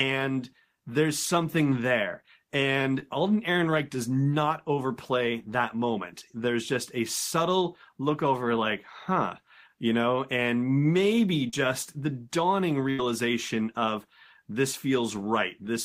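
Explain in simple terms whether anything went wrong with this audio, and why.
At about 3.0 s and again at 11.5 s there are brief smears or wobbles, each only a few hundredths of a second long. These are short concealed packet losses. Small pieces of the call arrived too late, so the receiver patched each hole by stretching the sound just before it, then rejoined the real audio.

At 12.90 s the sound briefly turns into a held buzz or fading hiss for about 80 ms, then picks up slightly further along. This is a burst of packet loss. Several pieces went missing in a row, so about 80 ms of the actual audio was lost and replaced by a fading continuation of the preceding sound.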